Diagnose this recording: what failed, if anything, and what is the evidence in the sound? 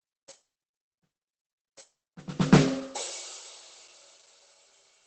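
Throughout the music the sound is muffled and hoarse, with nothing above 8.6 kHz. The codec stage is the likely cause: heavy Opus compression at a rate that fits about 12 kbps, forcing the encoder into its speech-oriented SILK mode, which narrows bandwidth and roughens musical tone.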